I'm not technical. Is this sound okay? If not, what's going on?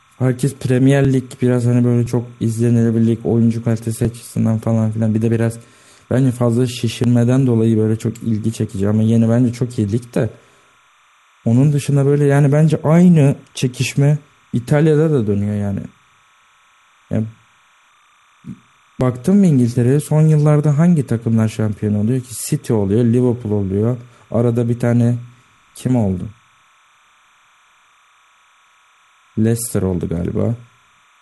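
No. Two separate problems are audible in this speech recording.

The first is timecode bleed, present the whole way through. Behind the speech there's a faint, steady chirping warble, like a tiny electronic bird that never stops. It comes from timecode, a timing signal used to keep video and sound in sync. The code switches rapidly between two high pitches, roughly 1 and 2 kHz, at a video rate of 29.97 frames per second, and some of it leaked from a nearby track or cable into this audio.

The second is overlap between stream segments, heard as tiny clicks or skips at 1.05, 2.06, 4.05, 7.04 and 19.01 seconds. The audio was delivered in pieces, and the spacing points to one-second chunks. Where two pieces claimed to overlap, the player threw away the shared bit, but that sound wasn't actually duplicated. So a sliver of sound, under 20 milliseconds each time, simply vanishes.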